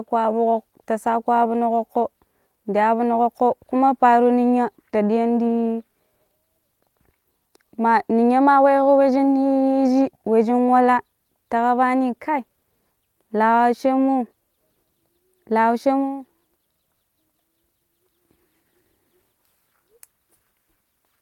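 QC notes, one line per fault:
No faults found on listening. Nothing in the speech needed a QC flag.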